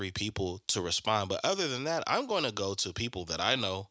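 No technical faults can be heard in the speech; it carries the ordinary marks of a call's microphone processing, with the lowest bass trimmed away and nothing above 8 kHz.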